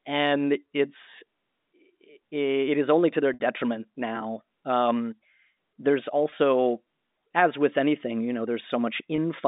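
At 3.34 to 3.40 s the sound briefly hangs on a buzzy, held tone that fades away before normal audio resumes. Shorter held buzzes follow at 6.30 to 6.32 s and 9.16 to 9.18 s. This is packet loss with pitch repetition. Audio went missing, 60 ms in the first gap (which fits three lost 20 ms packets) and 20 ms in each of the others. The receiver filled each gap by looping the last pitch period, all over a G.711 telephone line.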